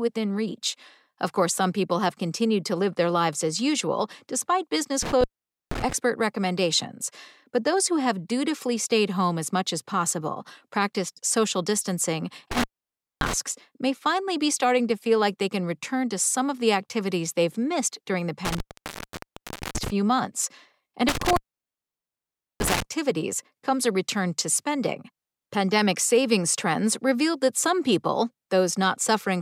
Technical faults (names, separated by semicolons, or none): intermittent contact